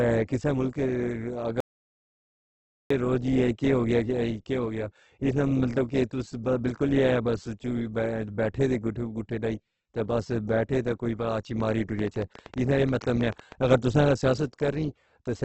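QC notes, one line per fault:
Throughout: Opus compression, likely at a low rate around 12 kbps in the codec's music-style mode. Nothing reaches past 8.2 kHz, so the top end is cut off, and the damage is heavy: instead of the watery swirl of MP3, the speech turns grainy and rough, because bands starved of bits get refilled with folded or noise-like content rather than left empty. That even, hissy texture with few holes is what separates it from MP3 artefacts.
1.60 to 2.90 s: audio dropout to silence. For 1.3 seconds the speech stops abruptly and the gap is silent, with no room tone or background hiss underneath, then it resumes mid-flow just as sharply. The dead-flat silence points to a likely lost input or link while the recorder kept writing. That sets it apart from a natural pause or a fade, where some ambience remains, and from a packet-loss concealment gap, which would smear or repeat sound.
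11.60 to 13.53 s: train of clicks. About twenty short, similar-shaped ticks arrive at roughly 10.4 per second, spaced unevenly, and they ride over the speech and the pauses alike, peaking about 5 dB above the speech level, ending just before "اگر تُساں". Because they keep their shape and cadence regardless of what the speech is doing, this reads as likely interference or a faulty connection, not as mouth clicks or plosives, which follow articulation and wouldn't march on through silences.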